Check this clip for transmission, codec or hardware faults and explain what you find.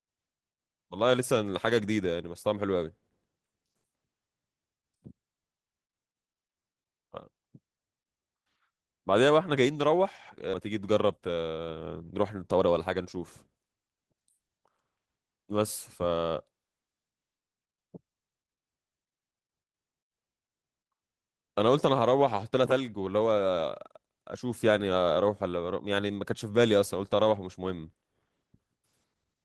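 Two transmission faults are present: a skip ahead followed by jitter buffer speed-up.

At 10.53 to 10.70 s the speech has a skip ahead. Roughly a second of audio never reaches playback, either lost in transit or discarded when the jitter buffer overflowed, and the receiver jumps straight to later speech with nothing inserted. The delay drops by about a second. You hear an abrupt jump mid-flow. On a waveform the envelope changes without a pause, and a spectrogram shows harmonic tracks ending and new ones beginning at the same instant.

Jitter buffer speed-up follows in two stretches. From 11.18 to 11.59 s playback runs at 115%, trimming about 70 ms. From 12.35 to 14.28 s it runs at 113%, trimming about 300 ms. The buffer holds more audio than it aims for, so it cuts out pitch-period-sized slices to shrink the delay. The speech sounds hurried but keeps its pitch. On a spectrogram, harmonic spacing stays constant while syllables and gaps look compressed in time.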